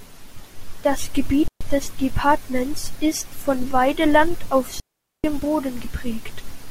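At 1.48 s the speech drops into a clean hole of near silence for about 0.13 s, then at 4.80 s a longer one runs about 0.44 s. Both are digital wireless dropouts: the link lost too much data, so the receiver muted with a quick fade, no noise burst either side.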